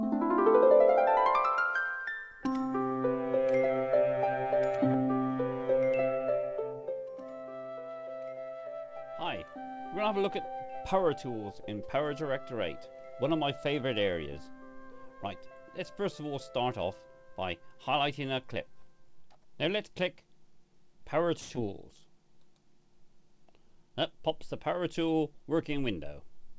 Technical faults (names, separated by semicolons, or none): short stall from a late packet; short concealed packet loss; jitter buffer speed-up